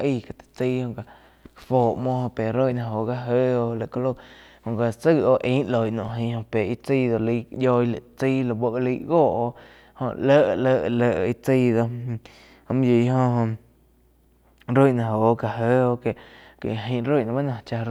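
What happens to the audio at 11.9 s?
At 11.9 s the audio is intact, with no dropout, click, distortion or other fault at that moment.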